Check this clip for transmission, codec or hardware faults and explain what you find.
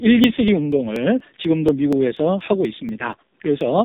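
Two faults are present: a heavily compressed mobile codec across the whole clip, and regular dropouts through most of it.

The AMR narrowband mobile codec runs throughout. Speech is squeezed into a vocal-tract model with very few pulses per frame, and the heavy damage points to one of its lowest bitrate modes, around 5 kbps. This makes the speech buzzy and synthetic. On a spectrogram, energy stops sharply at 3.8 kHz, with blank space above.

Periodic USB or driver dropouts recur every 0.24 s, from 0.24 s to 3.61 s, about fifteen in all. Each time, a stalled bus or driver skips about 10 ms of audio, heard as evenly spaced ticks while sound is present. The waveform shows regular discontinuities, and the spectrogram shows vertical lines.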